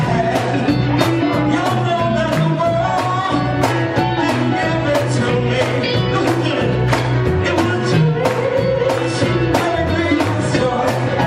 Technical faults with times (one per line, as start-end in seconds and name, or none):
none